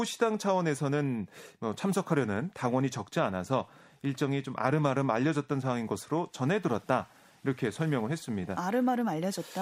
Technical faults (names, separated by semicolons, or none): none